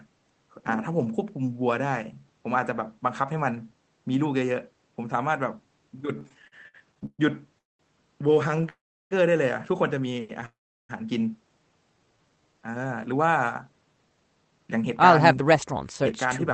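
Repeated stalls (stutter) run from 6.19 to 7.21 s: packets arriving late kept draining the jitter buffer, so thirteen held-over fills, the longest 128 ms, make about a third of that span drag and stammer.

A call audio freeze at 7.59 to 7.81 s inserts a 0.21 s gap, almost all of it silent, likely from packets held up in transit before playback resumes where it stopped.

Repeated stalls (stutter) return at 8.43 to 8.65 s as five brief catches, none longer than 18 ms, giving a quick flutter.

A call audio freeze follows at 8.69 to 9.13 s: a 0.42 s pause, 0.35 s of it silent, likely from delayed packets emptying the buffer.

Another call audio freeze at 10.46 to 10.91 s stops the sound for 0.44 s, 0.36 s of it silent, again likely a delivery hold-up.

Jitter buffer slow-down from 11.94 to 12.79 s repeats pitch periods to rebuild its reserve, adding 136 ms, so the sound plays at 85% speed with unchanged pitch and stretched syllables.

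Jitter buffer speed-up from 13.86 to 16.46 s trims short pitch-period slices, roughly 0.2 s in total, to shed excess delay, so the sound runs at 108% speed with the same pitch and a hurried feel.

Throughout, the audio carries the 8 kHz top-end cut-off of the Opus call path, which fits a low bitrate of around 20 kbps.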